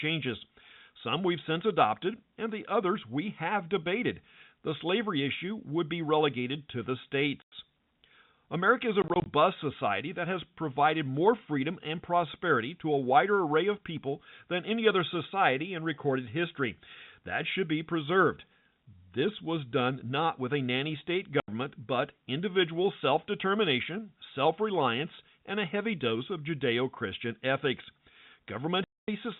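Four abrupt dropouts cut the speech: 7.42 s after "be relegated to the", a broken stutter at 9.02–9.26 s between "is a" and "society that has provided", 21.4 s after "with a nanny state", and 28.84–29.08 s. This is packet loss filled with silence; the gaps of 100, 100, 80 and 240 ms fit 20 ms packets replaced by silence.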